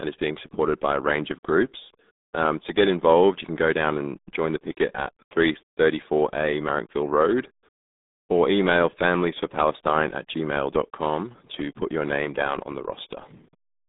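Throughout the speech, the RealAudio 14.4 codec's heavy coding damage makes it sound muffled and gargly, which fits a very low 8 kbit/s stream. On a spectrogram, energy sits between 200 Hz and 3.7 kHz, with a clean, empty band above 3.8 kHz.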